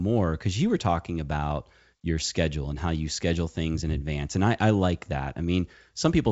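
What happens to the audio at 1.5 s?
Nothing goes wrong at 1.5 s: the speech there is intact, carried by G.722 wideband telephone coding at 64 kbit/s with no content above about 7.7 kHz.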